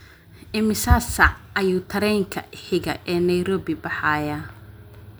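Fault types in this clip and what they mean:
No technical faults are audible.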